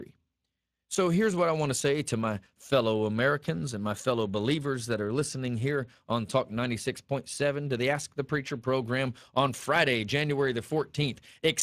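Throughout the clip the speech has passed through the Speex codec, whose CELP coding leaves too few bits for the excitation, at a rate that points to roughly 22 kbps. The voice sounds plainly noisy and hoarse, and nothing remains above 15.5 kHz.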